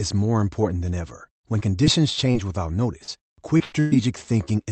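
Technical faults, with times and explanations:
1.59 to 4.49 s, short concealed packet loss at 1.59, 1.84, 2.32, 3.04, 3.58 and 4.45 s. Each time about 20 ms of audio failed to arrive, 40 ms at 3.04 s. The receiver extended the preceding sound for 10 to 34 ms, then blended back, leaving a brief smear or wobble.
3.64 to 3.93 s, burst of packet loss, at 3.64 to 3.74 s and 3.80 to 3.93 s. About 80 ms and then 120 ms went missing. The receiver continued the last sound and let it fade over roughly 85 and 113 ms, the second never reaching silence. The sound then resumes with the lost stretch absent.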